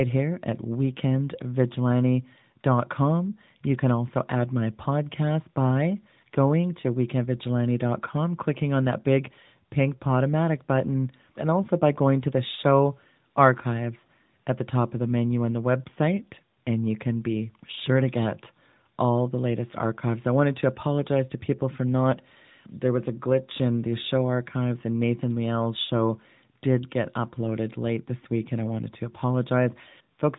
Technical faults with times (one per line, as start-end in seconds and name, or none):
none